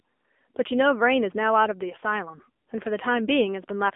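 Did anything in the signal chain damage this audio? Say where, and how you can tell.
Yes, at the codec stage: this speech has been through the AMR narrowband mobile codec the whole way through. Nothing gets above 3.6 kHz, the band sits at roughly 250 Hz to 3.5 kHz, and the voice has that buzzy, synthetic vocal-tract-model quality, which fits a low mode around 8 kbps.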